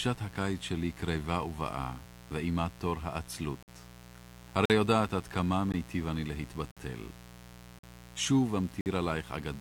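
Mains buzz runs through the whole clip, a steady raspy hum based on 60 Hz and sitting around 20 dB below the speech. Sharp switching spikes from a dimmer, rectifier or unshielded line leak in twice per cycle, spraying harmonics up into the kilohertz range.

Gaps between stream segments appear at 3.63–3.68, 4.65–4.70, 5.72, 6.71–6.77, 7.79–7.83 and 8.81–8.86 s. These hard-edged silent holes of 18 to 53 ms recur about once per second, which fits 1-second segments whose timestamps leave room the player fills with silence, delaying the audio without losing it.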